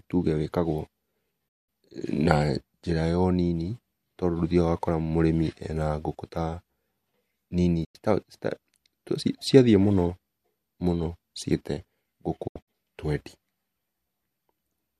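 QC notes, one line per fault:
1.48–1.69 s, digital broadcast dropout: the speech fades out over 8 ms and is muted for 192 ms, which fits eight frames of about 24 ms failing reception, then resumes mid-programme.
7.84–7.95 s, digital broadcast dropout: a 96 ms mute with 8 ms fades at each edge.
12.47–12.68 s, digital broadcast dropout: several short holes over 192 ms, 120 ms lost in total, the longest 72 ms, as good and bad frames alternate. The content sent during the holes is lost.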